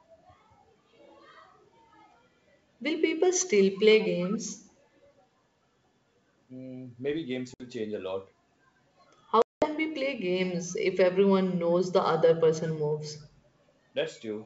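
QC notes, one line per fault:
7.54 to 7.67 s, packet loss on an ADPCM call: a 60 ms hard-edged silence from a few lost packets. The decoder's predictor drifts, so the speech returns slightly distorted.
9.42 to 9.68 s, packet loss on an ADPCM call: a longer 200 ms gap, about ten packets. The step size mismatches, so the wideband G.722 speech resumes slightly distorted before settling.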